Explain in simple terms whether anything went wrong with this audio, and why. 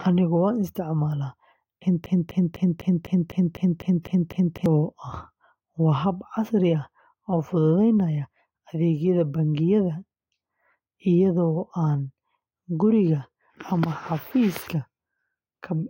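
Something did go wrong: the player, encoder or stream most likely stalled and kept resending the last scrap of speech it had, a fault known as a broken-record loop. From 2.06 to 4.66 seconds, the same quarter-second fragment plays back to back ten times, giving a stuttering, stuck sound. Whatever was said during those two and a half seconds is gone, replaced by the repeats.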